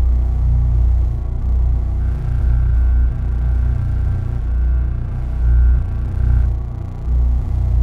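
From 2.00 s to 6.45 s the sound takes on a rough, metallic edge, most noticeable on its brighter parts, and it disappears wherever the sound drops to silence. This is periodic clock jitter: interference was wobbling the converter's sample clock at a steady rate of around 1.5 kHz, so every component of the sound picked up sidebands spaced that far above and below it, with higher-frequency content smeared hardest.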